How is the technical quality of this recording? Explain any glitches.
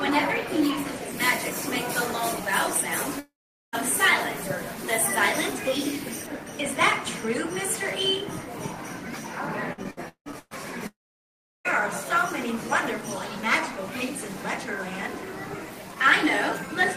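The recording has several clear faults: a treble-heavy stretch, two dropouts, and a burst of choppy concealment.

From 1.11 to 6.27 s, pre-emphasis is left on. The treble sits about 10 dB hot at 10 kHz relative to 1 kHz, consistent with an uncorrected 50 µs FM curve, so the sound is thin and sibilant.

At 3.19 to 3.76 s and 10.87 to 11.68 s, the audio is briefly extended as a fading buzz or hiss, then goes silent for roughly 0.43 s and 0.71 s. This is likely a long network dropout, with the lost material never returning.

From 9.73 to 10.54 s, there is repeated packet loss with a robotic sound. Six gaps, the longest 169 ms, are patched by stretching previous audio over about half the span, giving a choppy result with pieces missing.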